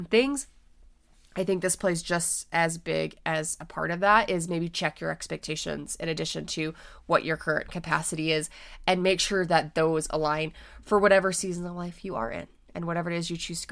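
No technical faults can be heard anywhere in the recording.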